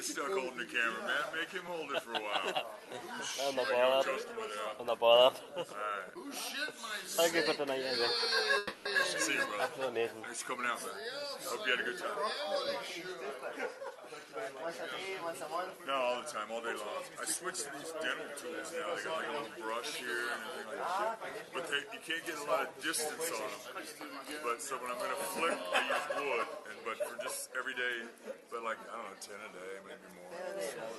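At 8.57 s the sound stops moving forward for 0.3 s. A fading buzz fills the hole, 280 ms long. This is a call audio freeze, likely from packets held up in transit. The jitter buffer ran dry. Playback then resumes where it stopped, so nothing is lost. The delay grows by 280 ms.

A jitter buffer speed-up follows, from 13.03 to 14.75 s, at 107% speed. Another runs from 15.26 to 15.85 s at 110%, and a third from 20.65 to 21.43 s at 105%. Each time the buffer held too much audio. The receiver cut out tiny pitch-period slices, roughly 150, 70 and 50 ms in total. The pitch stays the same, but the sound feels hurried. All of it sits on the Opus call path, with the top end ending near 12 kHz.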